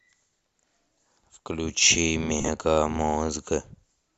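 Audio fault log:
2.40–2.48 s, lost LE Audio frames: 52.5 ms missing across 75 ms, longest run about 40 ms, refilled with sign-scrambled spectrum repeats, heard as noisy smear.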